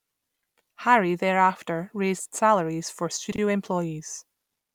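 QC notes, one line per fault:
3.32–3.38 s, chunks out of order: just after "thereafter raised salaries for", a 20 ms chunk of speech plays two chunks late, after the two that should follow it. No audio is missing, but the reordering leaves a brief jumbled blip and three hard joins.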